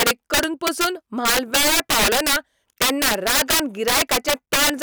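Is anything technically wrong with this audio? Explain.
Yes. Integer overflow runs through the whole speech clip. The signal is driven about 12 dB too hot, and instead of being limited, every sample past the integer ceiling wraps around to the opposite extreme. Roughly 7 percent of samples are affected, all on the loudest syllables, and the loud sounds turn into a tearing buzz far harsher than clipping. On a waveform, peaks jump from full positive to full negative. A spectrogram shows bright broadband vertical streaks at those moments.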